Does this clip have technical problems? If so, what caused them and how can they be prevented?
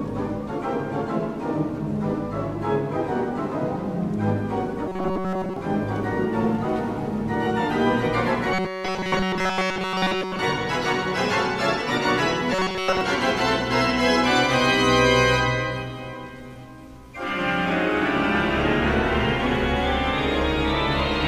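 Yes. At 4.88 to 5.56 s, 8.54 to 10.39 s and 12.53 to 13.01 s the sound turns into a rigid metallic buzz at 188 Hz, which is robotic sound from repeated short buffers. The first two stretches are made up entirely of repeats, and the last is mostly repeats. The likely cause is audio arriving too seldom, so the software loops a fragment about 5.3 ms long, imposing a buzz at one over that length, while the real audio is skipped. Larger playback buffers, and processing that keeps up with real time, would prevent it.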